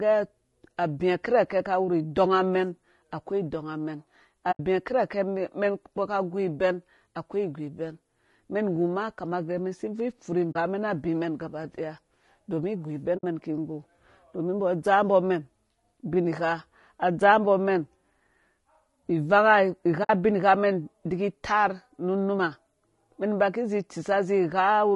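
From the start, the speech sounds rough and grainy. Noise fills the gaps between harmonics, and the top band sounds thin and synthetic. Low-delay AAC compression is the likely cause. Its short frames resolve pitch poorly, and the damage fits a low bitrate around 32 kbps.

Then comes AAC frame loss with muting. The decoder zeroed the missing frames, so the sound fades out and back in. The holes come at 4.51–4.60 s after "akoi idɔngamɛn", at 10.51–10.56 s after "bvui ipfuri", at 13.17–13.24 s, and at 20.03–20.10 s before "ubinghamɛn idiki".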